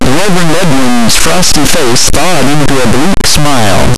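Right through the clip the speech carries a harsh, buzzy distortion, and the pauses fill with loud noise too. That's likely a stuck bit, with one data line jammed at a fixed value. The error step sits near full scale, so it's a top bit.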